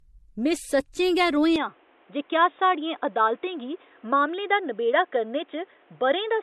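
From the start, the speech carries the smeared, swirly artefacts of two lossy codecs heard together, likely transcoding between lossy codecs, which fits an MP3 stage followed by AAC. A spectrogram shows a flat ceiling at 12.5 kHz, with nothing above it, and patchy, blocky high bands beneath.

At 1.56 s, the sound turns dull and boxy, likely from the input switching to a poorer device, with no gap and no level jump. On a spectrogram the ceiling drops abruptly to 3.8 kHz, and a new noise floor sits roughly 35 dB below the signal.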